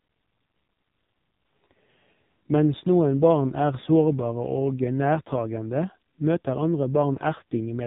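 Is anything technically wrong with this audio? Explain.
Yes. Throughout the clip the speech has been through the AMR narrowband mobile codec (AMR-NB), and the damage is heavy. The codec samples at 8 kHz, so nothing above 4 kHz survives, leaving the audio muffled and telephone-like. Each 20 ms frame is rebuilt from a vocal-tract model excited by a few pulses. With so few bits to describe them, the voice turns buzzy and synthetic, which fits one of the low modes, around 5.9 kbps.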